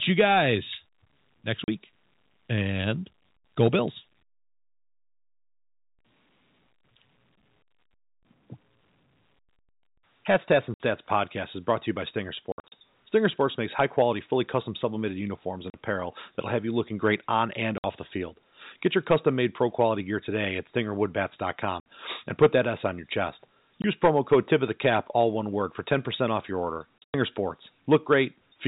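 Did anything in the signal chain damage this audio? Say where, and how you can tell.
Yes, at the network stage: packet loss filled with silence. The sound drops to dead silence at 1.64–1.68 s, 10.74–10.80 s (just before "podcast is brought to"), 12.52–12.72 s, 15.70–15.74 s (between "custom sublimated uniforms and" and "apparel that'll have you"), 17.78–17.84 s, 21.80–21.86 s (before "and put that"), 23.82 s, and 26.99–27.14 s. The gaps at 12.52 s and 26.99 s are clusters of shorter holes. Every gap is a multiple of 20 ms, which fits 20 ms packets. Concealment would smear or repeat the sound across the gap, and here the receiver inserted silence instead. The 4 kHz ceiling of the G.711 telephone coding stays the same through every gap.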